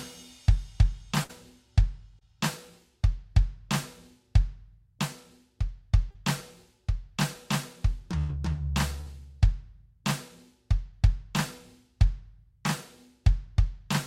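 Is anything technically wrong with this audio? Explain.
Yes, there are dropouts. A burst of packet loss hits at 1.23 to 1.31 s, 8.18 to 8.31 s and 9.01 to 9.08 s. Each time the receiver stretches the last sound and fades it down for roughly 55 to 108 ms, then jumps ahead, skipping 60 to 100 ms of music. Short concealed packet loss turns up at 2.19 to 2.23 s and 6.11 to 6.16 s, where 20 to 40 ms never arrived and got patched over, leaving a quick smear or wobble.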